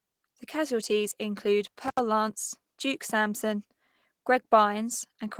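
Opus voice compression runs through the whole speech clip, with plainly audible damage: muffled, hoarse, slightly robotic vowels from coarse excitation coding, which fits a hybrid SILK-plus-CELT mode at around 16 kbps. Unlike simple low-pass filtering, the band still reaches about 20.3 kHz, so the dullness comes from the coding itself.

From 1.86 to 1.99 s an intermittent contact breaks the signal. The line stays open for about 74 ms, and the sound cuts out between crackles at both edges, with faint hiss in the gap. A codec packet loss would leave a smooth concealed gap without that crackle.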